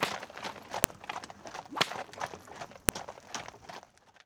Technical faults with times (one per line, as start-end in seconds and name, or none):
0.84 file header played as audio
2.89 file header played as audio